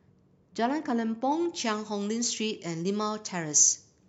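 From 1.32 s until the end, the speech takes on a thin, glassy brightness with hissing sibilants: pre-emphasis left on. The treble lift matches the 75 µs FM curve, climbing about 14 dB at 10 kHz relative to 1 kHz, and the complementary de-emphasis was never applied. Unlike a broad treble shelf, this boost rises steadily from about 2.1 kHz upward, so sibilance and air sharpen far more than the upper midrange does.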